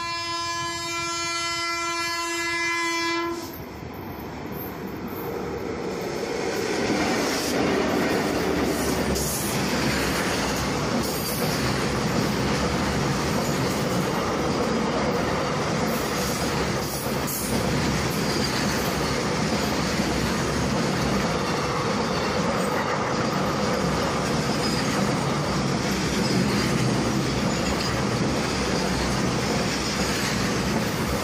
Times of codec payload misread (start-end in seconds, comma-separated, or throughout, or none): none